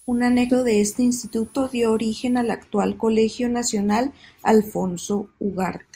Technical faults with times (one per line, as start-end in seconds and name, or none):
0.00-2.54 switching supply whistle
0.49-0.54 compressed frames skipped